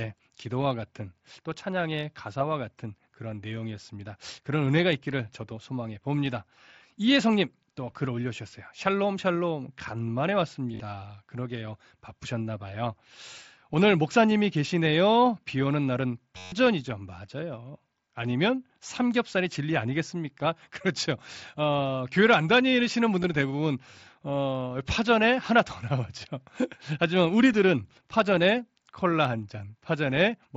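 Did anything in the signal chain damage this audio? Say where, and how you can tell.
Yes. Concealed Bluetooth headset packet loss on the headset-to-phone radio link, at 10.72 s, 16.38 to 16.52 s and 23.23 s. The receiver filled the gaps by repeating recent waveform. The roughly 140 ms run at 16.4 s buzzes at steady level, warbling where real speech resumes.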